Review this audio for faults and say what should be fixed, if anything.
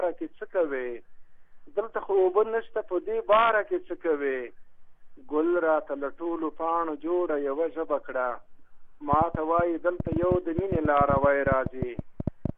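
A train of clicks runs from 9.13 to 12.50 s, around 30 similar pulses at uneven spacing, roughly 15 dB above the sound, likely from equipment interference or a loose connection. Unlike a single dropout or isolated pop, it repeats throughout. Shield and secure cables and power supplies, and keep interfering equipment away.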